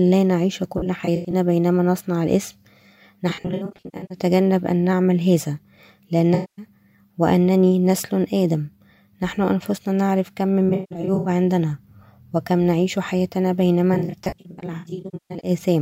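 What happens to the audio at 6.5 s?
At 6.5 s the sound falls inside an AAC frame loss with concealment, running from 6.34 to 6.65 s. The decoder rebuilds the missing stretch from its last good spectrum, so you hear a smeared, noisy wash rather than the hard, clean silence of a plain dropout.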